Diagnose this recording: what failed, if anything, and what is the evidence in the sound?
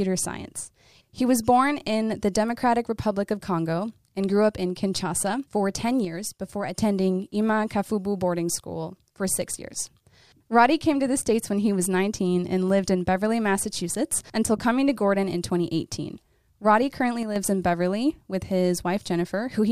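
Speech steps down abruptly by about 6 dB at 6.05–6.78 s and 17.23–17.36 s, likely one channel dropping out at an analogue connector: a flat halving, not a fade.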